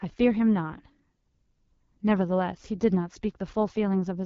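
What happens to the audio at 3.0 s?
At 3.0 s the speech sounds rough and raspy with nothing above 7.4 kHz, from AMR wideband (HD Voice) coding across the whole clip, which fits its low 8.85 kbit/s mode.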